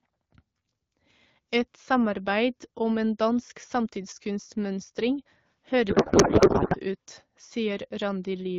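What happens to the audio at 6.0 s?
At 6.0 s the speech falls inside a codec payload misread running from 5.89 to 6.77 s. Octet-aligned AMR frames are being unpacked as bandwidth-efficient, so every field lands in the wrong place and the decoder turns out garbled noise and warble that barely tracks the speech. On a spectrogram the harmonic striations give way to smeared, disordered energy, and the waveform envelope stops following the syllables.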